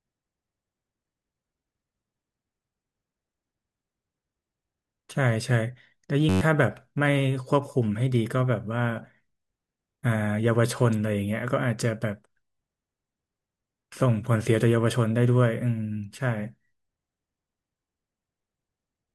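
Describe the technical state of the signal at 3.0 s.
At 3.0 s the speech signal is intact, with no audible technical fault at that moment.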